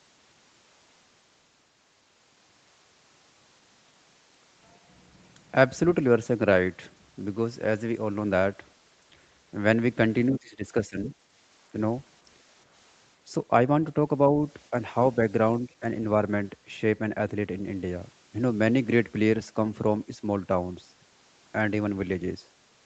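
Speech suppressed in double talk hits this speech recording from 10.39 to 11.15 s and from 15.66 to 15.83 s. The level drops by about 20 dB, then about 10 dB, most likely because an echo canceller confused simultaneous talk with echo and attenuated both.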